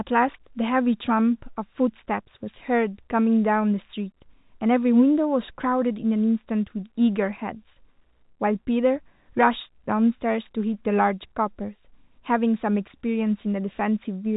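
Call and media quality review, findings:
No call or media quality findings; the speech comes through as G.711 telephone audio, band-limited to 3.8 kHz.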